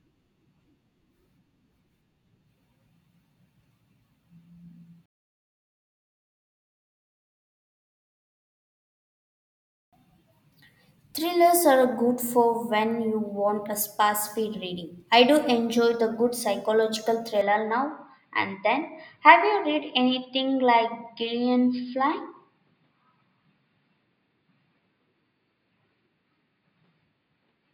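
At 17.41 s, just after "enjoy the good psychological", the speech turns duller and narrower and stays that way to the end of the clip. Nothing passes above 5 kHz from then on, and a faint new noise floor appears, well below the speech. There is no gap at the switch and no obvious level jump. This points to an input switched to a poorer device, likely a fallback microphone or headset profile with a restricted band.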